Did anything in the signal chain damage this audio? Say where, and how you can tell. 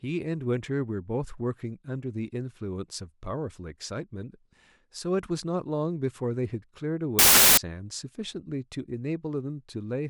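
Yes: samples built from the wrong bytes, from 7.19 to 7.57 s, a fault at the sample-format conversion stage. For that stretch of the speech, the signal collapses into loud, harsh broadband noise. This happens when the reader misassembles each sample's bytes, offset by one or with their order swapped, so the rapidly changing low-order bits land in the most significant position and dominate every value.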